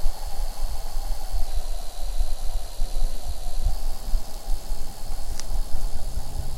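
From 1.47 to 3.71 s, a wrong sample rate runs the sound at 0.919 speed, about 1.5 semitones lower, which fits 48 kHz material played at 44.1 kHz.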